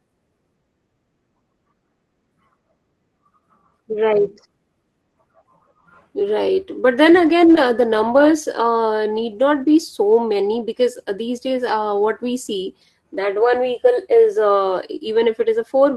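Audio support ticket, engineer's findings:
No audible faults found.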